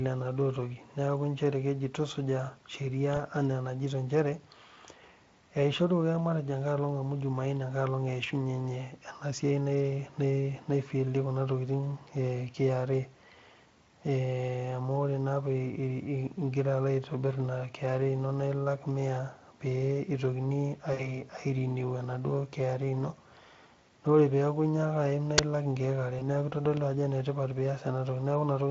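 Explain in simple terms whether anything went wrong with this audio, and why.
A few things went wrong. There's VoIP packet loss concealed by the speech codec at 3.15–3.18 s, 20.93–21.22 s and 26.19–26.23 s: bits of the call went missing, so the decoder guessed, leaving brief buzzy, fading smears. At 25.38 s, an uninitialised buffer lets out a sharp, loud crack, about 10 ms of junk memory played as sound.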